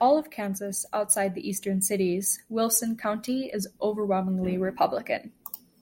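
Nothing in this recording comes across as a technical fault, just the speech carrying on without any dropouts, glitches or interruptions to point at.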